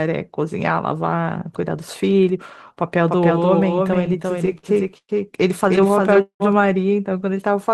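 A second capture path, likely slower than the main one, or an edit that left two copies out of step, has put a doubled audio track into this speech clip from 3.08 s to 6.52 s. A full-band duplicate trails the original by roughly 300 ms at about 5 dB lower, with no reverberant tail or room colouring. It switches on and off abruptly at those edges, so the speech sounds smeared and echoed. Within that stretch, packets repeatedly arrived late or slower than playback consumed them, emptying the jitter buffer over and over and producing repeated stalls (stutter). From 3.87 s to 5.11 s there are about fourteen short stalls, the longest 112 ms, with roughly 276 ms filled in. From 5.69 s to 6.42 s there are about nine, the longest 188 ms, with 270 ms filled. Each time the receiver stretched the last sound, fading it during the longer waits, so nothing is lost but the speech drags and hiccups.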